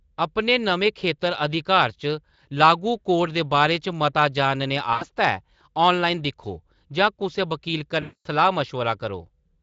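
Packets were lost twice, and the Speex decoder covered each gap by repeating its last pitch and filter at falling gain. This is VoIP packet loss concealed by the speech codec. After "मता जानने", 4.93 to 5.06 s, about 80 ms is stretched out and fades. After "दिक्खो जां कुसै वक़ील", 8.01 to 8.27 s, a 240 ms gap stretches into a longer, fading sound.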